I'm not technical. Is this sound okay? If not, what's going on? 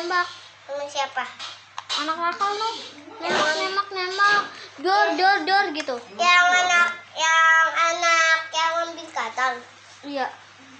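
Yes, this sound is okay; there's nothing going on that needs fixing.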